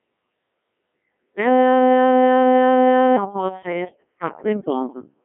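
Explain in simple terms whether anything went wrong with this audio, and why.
The speech passed through a Codec 2 vocoder, a very low-rate digital-radio codec that sends only a rough description of the voice (its pitch, loudness and overall tone) and rebuilds it from scratch out of simple tones at the other end. The original waveform is lost, so from start to finish the voice sounds robotic and buzzy. It is also squeezed into a narrow telephone-like band, with nothing above about 3.8 kHz, which makes it dull and thin.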